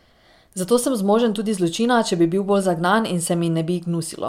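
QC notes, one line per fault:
Nothing stood out on listening to the speech.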